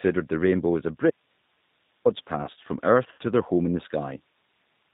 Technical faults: G.729 codec; audio dropout to a faint residue; VoIP packet loss concealed by the speech codec

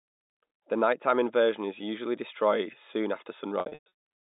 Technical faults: packet loss with pitch repetition

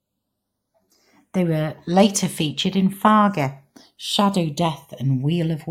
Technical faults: channels drifting apart

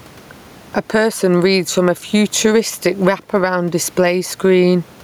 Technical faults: gain pumping

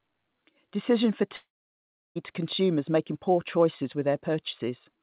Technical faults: long network dropout

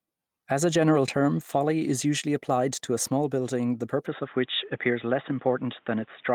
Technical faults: input switched to a poorer device

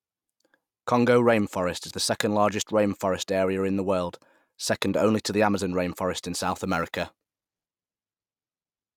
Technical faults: crude rate conversion

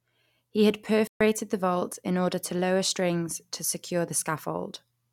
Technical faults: playback stall

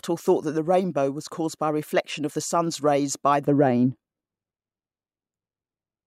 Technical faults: de-emphasis applied wrongly

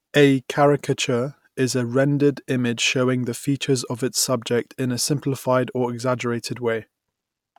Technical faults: none

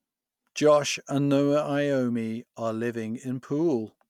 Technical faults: none

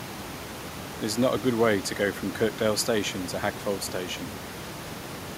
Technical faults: none

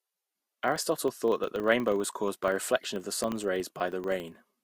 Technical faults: filter restarted on every block

